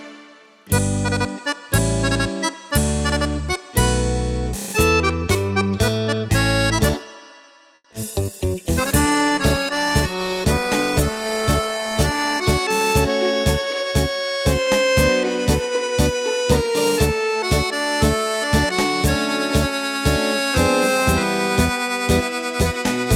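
A burst of network trouble around 8 s is followed by several seconds of degraded audio. First comes a short stall from a late packet at 7.75 to 7.85 s. The receiver held the last sound for about 90 ms while it waited, then resumed from the same point, so nothing is lost but the sound hangs too long with a slight buzz or dip. On a spectrogram the harmonics run as flat, unchanging horizontal bands for that stretch, and the waveform shows a near-identical repeating pattern. That wait also adds about 90 ms of delay to everything after it. Right behind it are two bouts of short concealed packet loss, at 7.91 to 7.93 s and 7.93 to 7.95 s. The real audio missing there, about 20 ms and then about 10 ms, was patched by extending the preceding sound and blending back into the arriving signal. The patches come through as a quick smear or wobble, visible as a slightly blurred, lower-detail sliver in the spectrogram with a small kink in the waveform envelope at each join. 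From 8.2 to 12.55 s there is a call bitrate drop from 128 to 23 kbps, sitting at its lowest for about 4.3 s. The encoder had far fewer bits to spend, so the sound turns rough and muffled. A spectrogram shows the upper frequencies sharply cut away above a flat ceiling and the remaining content looking blocky and smeared. Overlapping its end, from 12.24 to 12.74 s, a jitter buffer speed-up trims out about 50 ms by dropping short pitch-period slices to shrink the built-up delay. Playback runs about 8% fast at unchanged pitch and sounds slightly hurried. In the waveform, periodic cycles vanish in quick succession while the spectrogram's harmonic spacing stays the same.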